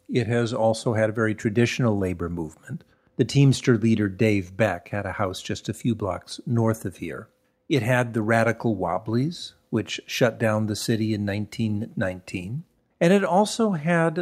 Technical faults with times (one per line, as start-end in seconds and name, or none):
none